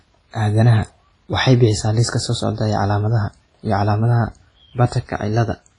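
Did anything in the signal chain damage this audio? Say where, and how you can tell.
Yes, at the codec stage. The speech rings and sounds washy throughout, and nothing reaches past 10.3 kHz. Long transform blocks smear noise, likely from heavy WMA compression near 24 kbps.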